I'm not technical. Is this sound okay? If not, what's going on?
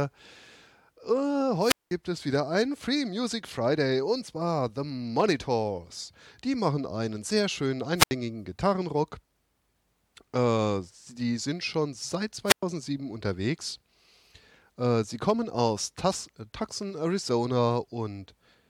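No. There are three wireless microphone squelch dropouts in this speech, at 1.60 s, 7.96 s and 12.46 s. Each time, the radio link from the microphone weakens and a short burst of hiss comes up. The receiver then mutes itself so it doesn't pass loud static, which leaves a gap of near silence. That gap lasts about 0.19 s the first time, 0.08 s the second and 0.11 s the third, and then the voice comes back.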